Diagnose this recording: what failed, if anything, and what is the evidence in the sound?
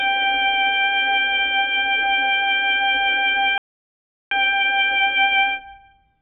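The codec stage failed: the music is heavily damaged throughout by AAC compression. The top is cut off and dull, and sustained tones warble and smear. This is likely AAC-LC starved of bits, at a rate that fits about 8 kbps, so bands are dropped or filled with substitute noise. A plain low-pass filter would sound dull too, but it would not warble or fizz.

Playback failed with a playback stall. The music stops dead at 3.58 s and stays silent until 4.31 s, a gap of about 0.73 s, and then carries on. Clean silence with no crackle or repeated fragment points to the player likely running out of data or being blocked, not to a network dropout masked with concealment. A dropout would smear or repeat material across the gap.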